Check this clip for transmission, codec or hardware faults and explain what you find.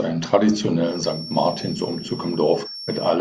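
Two faults are audible in this speech: a feedback whistle and a short stretch of damaged data in a compressed stream.

From 0.8 s to the end, a thin, steady tone near 5.5 kHz sits about 15 dB under the speech, swelling and fading slowly in level. That behaviour points to a feedback whistle, likely a loudspeaker-to-microphone loop held just at the edge of feedback, so one frequency rings on without building up. Unlike a constant electrical hum or a test tone, its level drifts, and it has a single high pitch with no low harmonic series under it.

Between 2.60 and 2.67 s there is a brief disturbance in the speech, the mark of damaged data in a compressed stream. Corrupted bytes left the decoder unable to read those frames, so it lost sync and skipped ahead to the next valid frame header. A network dropout would leave a gap or a repeated fragment instead.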